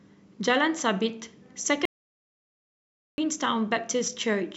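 From 1.85 to 3.18 s, an audio dropout to silence, likely from a lost input, cuts speech to silence. Unlike a pause, no room tone survives.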